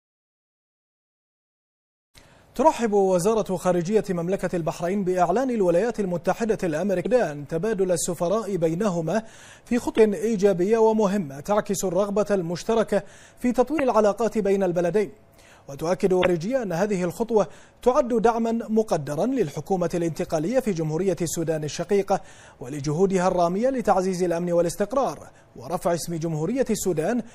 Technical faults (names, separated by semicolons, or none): MP3 compression; damaged data in a compressed stream